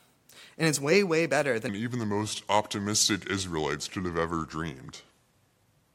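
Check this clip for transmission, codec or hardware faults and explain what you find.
One fault: a section at the wrong speed. From 1.69 s, right after "it's way way better", to the end, speech plays at 0.79 times normal speed, likely from a clock mismatch in playback or editing. Pitch drops about four semitones, sounding deep and drawn out. The spectrogram shows harmonics and formants shifting downward, and the waveform's syllables stretch wider.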